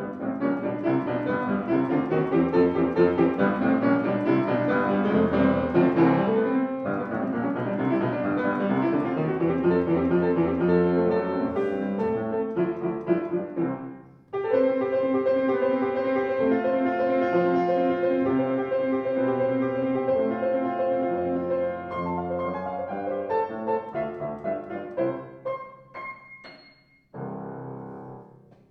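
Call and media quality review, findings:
No faults found on review. Nothing to escalate for this recording.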